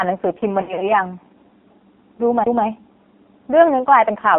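Throughout, the speech sounds buzzy and synthetic, thin and boxed in, with nothing below about 200 Hz or above 3.4 kHz. This is heavy AMR narrowband mobile codec damage: a vocal-tract model driven by sparse pulses at a low bitrate, which fits AMR-NB at 5.9 kbps.

From 0.62 to 0.97 s the speech dips, warbles and smears, briefly stretching and fading before recovering roughly. These are lost AMR speech frames: corrupted frames, consistent with about 120 ms missing in runs of up to 60 ms, were filled by repeating earlier settings at falling gain.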